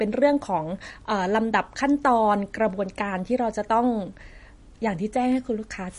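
MP3 compression artefacts run through the whole of this speech clip, likely from encoding at a low bitrate, with the damage plainly audible. Nothing is present above 10.6 kHz, where the encoder has cut the treble to save bits, and the damage points to a rate around 40 kbps. With so few bits, weak frequency lines are zeroed and flicker between frames, giving the audio a watery, swirly texture and dulling its top end.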